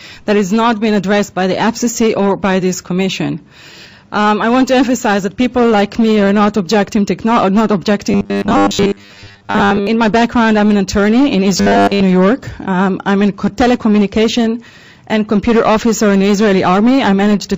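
Audio likely arrived too slowly, so 10 ms buffers were replayed in place of most of the missing sound, giving robotic sound from repeated short buffers: a rigid, metallic 100 Hz buzz from 8.11 to 9.87 s and again from 11.57 to 12.02 s.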